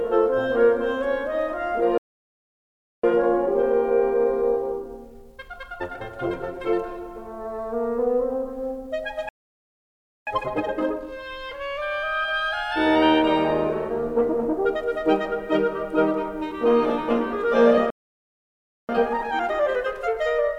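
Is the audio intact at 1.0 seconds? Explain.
Yes, at 1.0 seconds the music plays through intact, with no dropout, click, distortion or other fault at that moment.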